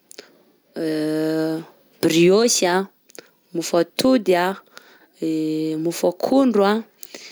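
Speech with gain pumping throughout: the level is pulled down by around 5 dB under each louder syllable, likely from excessive input gain driving a fast limiter.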